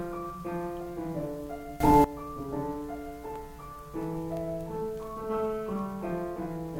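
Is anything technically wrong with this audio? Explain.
Yes. From 1.80 to 2.04 s the music jumps about 17 dB louder in a single step: a sudden gain jump, likely a gain setting applied without a ramp. Unlike a fade or compressor pumping, the change is instant and the background noise rises with it.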